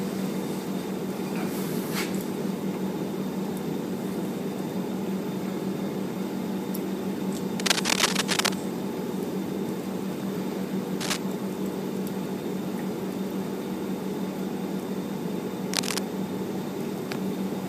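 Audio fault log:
7.59–8.54 s, cable scratch noise: a rough, crackly rustle sits on top of the sound for most of a second, a bit louder than the sound itself. It's likely a worn cable or connector being shifted, so the contact keeps making and breaking and sprays uneven noise bursts.
11.00–11.17 s, cable scratch noise: a short scratchy flick, roughly level with the sound.
15.73–15.99 s, cable scratch noise: another brief rustle at a similar level.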